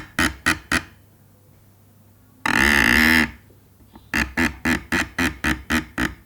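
No technical faults can be heard anywhere in these everyday sounds.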